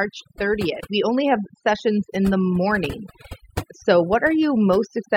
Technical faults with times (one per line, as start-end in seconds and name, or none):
0.00-5.16 overdone noise removal